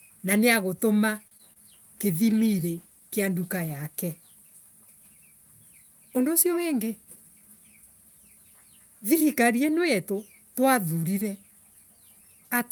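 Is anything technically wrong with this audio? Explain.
Yes. The speech has four kinds of transport and codec fault, all within the first 7.2 s of the clip.

A short stall from a late packet occurs at 1.27 to 1.33 s. A packet arrived behind schedule and the jitter buffer ran dry, so the receiver held the last sound for about 38 ms until the data turned up, then resumed from the same point. Nothing is lost, but the sound is briefly drawn out, with a faint buzzy hold, and playback sits 38 ms later afterwards.

Short concealed packet loss follows twice, at 1.37 to 1.41 s and 1.53 to 1.57 s. Each time about 20 ms of audio never reached the decoder in time. The receiver papered over the gap by extending the preceding sound and crossfading back into the real signal. Each event is a brief smear or slight wobble rather than a clean dropout, and a short consonant can be lost.

A call bitrate drop runs from 2.00 to 3.93 s. 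The bandwidth estimate fell and the encoder was forced to a much lower rate, which fits a move from about 48 kbps to about 18 kbps, held at its lowest for roughly 1.9 s. Coarser coding and a reduced upper bandwidth make the speech sound rough and muffled, with a watery quality, until the rate recovers.

A jitter buffer speed-up affects 6.83 to 7.17 s. The buffer held more audio than its target, so the receiver cut out short pitch-period-length pieces in quick succession, removing around 50 ms in total. Playback runs at about 111% speed with unchanged pitch, and the speech sounds hurried over that third of a second.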